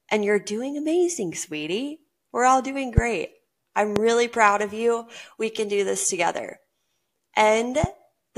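Loud pops occur at 2.98 s, just after "all doing", at 3.96 s, just before "really proud of you", and at 7.84 s. Each is a single sharp crack lasting about 25 ms, peaking roughly 20 dB above the speech (about 15 dB for the last). They are likely sudden voltage spikes from a plug, switch or static discharge added onto the signal, and the speech continues underneath each one.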